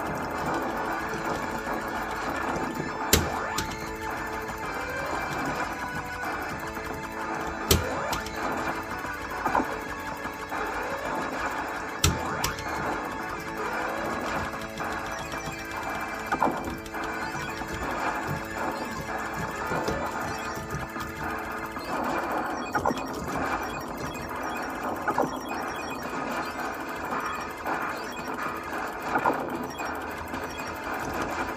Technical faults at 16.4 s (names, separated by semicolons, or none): none